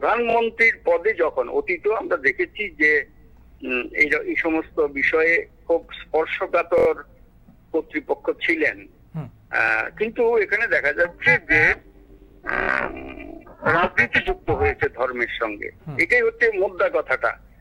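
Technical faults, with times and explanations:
0.30–0.35 s, 6.78–6.87 s, 9.68–9.71 s and 12.63–12.68 s: repeated buffer. New audio arrived late, so a piece about 23 ms long, which fits a 1024-sample buffer, plays again. That's three plays at 0.30 s, five at 6.78 s, two at 9.68 s and three at 12.63 s, each with a hard join, so you hear a quick stutter.
11.05–14.85 s: overlap-add ripple. The frames are being rejoined with overlaps that don't add up to a steady gain, so the level pumps once per frame, around 300 times a second and about 60 dB deep. That comes across as a metallic buzz with extra tones around each note rather than a flutter.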